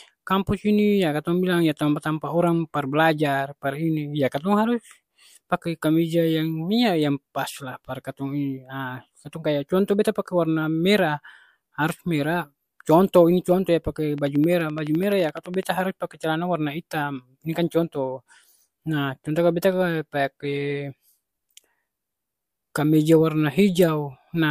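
From 14.18 to 15.64 s, a train of clicks sits over the speech. About twenty near-identical pulses arrive at a steady 11.8 per second. They peak roughly 5 dB above the speech. The likely cause is interference or a faulty connection or power supply injecting pulses.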